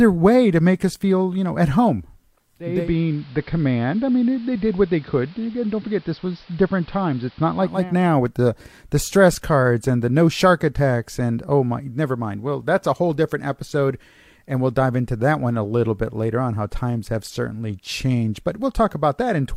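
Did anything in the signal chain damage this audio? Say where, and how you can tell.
Yes: digital radio blending to analogue, 2.57 to 7.96 s, between "you know at home" and "with the the stress". At reception, the receiver cross-faded over 379 ms to the AM broadcast: level drops about 2 dB, hiss sits roughly 30 dB down.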